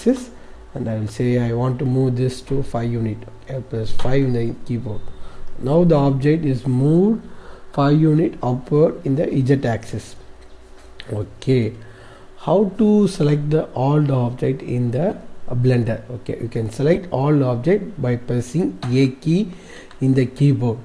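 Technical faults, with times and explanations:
15.10–15.15 s and 16.94–16.98 s, corrupt frame decoded: two short, fairly loud bursts, about 57 ms and 46 ms long, with energy at frequencies that don't belong to the surrounding sound. Bits inside a few compressed frames were damaged, and the decoder played them anyway. Misread gains and spectral codes put energy in the wrong bands for about the length of each damaged frame, so each burst lasts only two or three frames.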